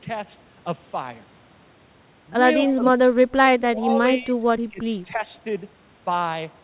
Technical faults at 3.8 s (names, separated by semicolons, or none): speech suppressed in double talk